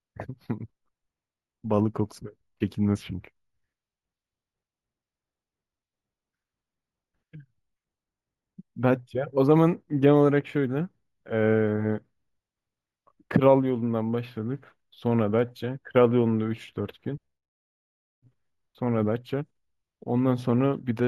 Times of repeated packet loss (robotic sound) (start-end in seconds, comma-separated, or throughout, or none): none